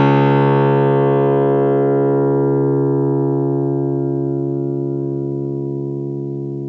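No audible technical faults.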